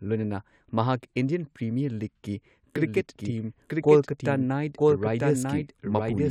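From 2.76 s to the end, a doubled audio track appears: a full-band second copy of the speech runs roughly a second behind, a few decibels quieter, likely from a slower capture path. It starts abruptly, without decay, and the spectrogram shows each pattern repeated one second later.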